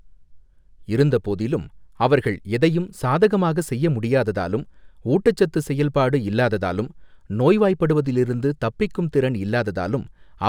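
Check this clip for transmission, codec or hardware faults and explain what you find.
One fault runs through the whole of the speech: imaging from linear upsampling. The audio sounds like it came from a 24 kHz source raised to 44.1 kHz by straight-line interpolation between samples. That crude filter dulls the top of the original band and leaves a faint mirrored copy of the spectrum between 12 kHz and 24 kHz, roughly 40 dB below the speech, heard as a light metallic shimmer on sibilants. Aliasing would fold content downward into the band instead of mirroring it above.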